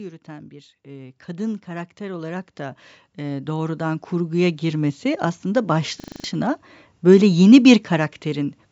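From 0.05 to 5.12 s, automatic gain rising lifts the level by about 19 dB. Speech and background swell together as the control keeps adding gain. At 6.0 s, a system hang loop begins and lasts until 6.24 s. A 40 ms piece of audio repeats six times, giving a 25 Hz buzzing stutter, and roughly a fifth of a second is lost.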